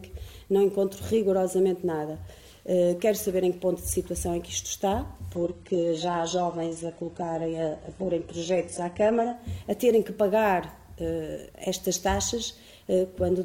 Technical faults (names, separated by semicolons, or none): adaptive stream at a lower bitrate